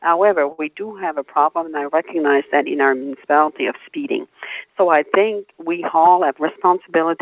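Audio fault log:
throughout: noise suppressor applied to music or sounds. A speech-tuned suppressor treats held tones and tails as noise, pulling them down by roughly 5 dB, so the sound pumps and thins.
0.52–0.60 s: short stall from a late packet. A packet arrived late and the buffer ran dry; the last sound was stretched about 62 ms, holding it too long with a slight buzz or dip.
5.96–6.66 s: jitter buffer speed-up. The buffer held excess audio, so short pitch-period pieces, roughly 50 ms in all, were cut, running the sound about 6% faster at unchanged pitch.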